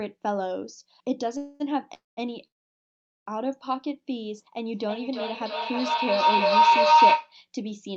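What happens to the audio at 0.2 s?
Nothing goes wrong at 0.2 s: the speech there passes intact through the call's microphone processing and the Opus call path, with the top end ending around 8 kHz as that path normally does.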